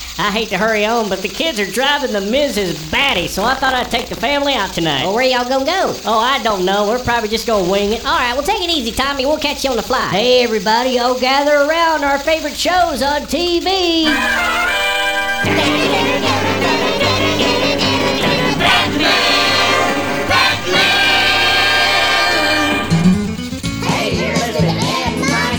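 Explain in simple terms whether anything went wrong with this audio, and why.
From 2.74 to 4.22 s the sound gains a robotic buzz at about 43 times a second. This is buffer tearing: each chunk of audio, which fits a 1024-sample buffer, gets a small slice of sound from a moment earlier spliced in. Unlike random clicks, the rattle is steady and regular.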